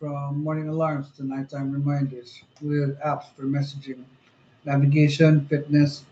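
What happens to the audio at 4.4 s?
At 4.4 s the automatic gain control is still raising its gain after judging the input too quiet, a rise running from 0.05 s to the end, so speech and background swell louder together.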